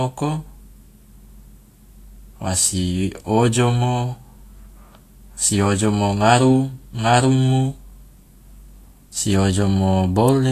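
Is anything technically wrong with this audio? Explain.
Yes. Throughout the speech, Vorbis compression at a low setting, which fits a bitrate likely near 34 kbps, removed everything above 14.2 kHz and quantised the remaining treble so coarsely that fine detail became noise. This plainly audible damage sounds hissy and grainy, with roughened tones and blurred attacks.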